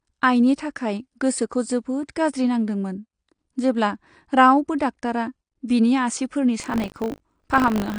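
Heavy quantisation in a transform codec runs through the whole recording, likely AAC compression at a low bitrate in the region of 32 kbps, AAC-LC style. To save bits the encoder has lowered the band cut-off and starved the remaining bands, so the speech sounds dull and muffled. The damage is plainly audible: sibilants come out fizzy and smeared, and sustained vowels carry a warbling texture where sparse spectral detail shifts from frame to frame.

From 5.67 to 5.70 s there is pre-echo. A sharp attack lands late in a coding block, and the quantisation noise budgeted for that loud onset is spread across the whole block, including the quiet stretch just before it. The result is a brief hiss smeared about 22 ms ahead of the attack, which itself sounds softened rather than crisp.

Buffer tearing sets in at 6.58 s and lasts to the end. The writer and reader of the playback ring buffer have drifted out of step and cross inside every period, so a small slice of each buffer replays audio from roughly two buffers earlier, with hard splices on either side. 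The splices repeat at 50 Hz, which fits a buffer cycling every 20 ms, and they produce a steady robotic buzz that rides on the speech and disappears in the gaps.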